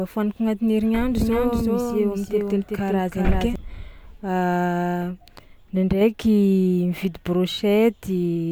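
From 1.18 s to 3.56 s the speech carries a doubled audio track: a second full-band copy trails by around 400 ms, roughly 5 dB quieter, dry and without decay, and it cuts in and out abruptly. A slower capture path likely recorded the signal twice.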